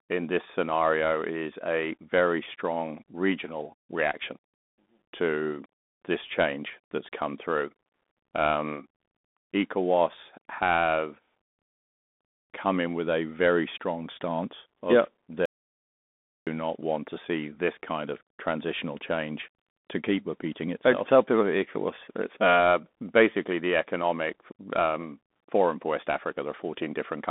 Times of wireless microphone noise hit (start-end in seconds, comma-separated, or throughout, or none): none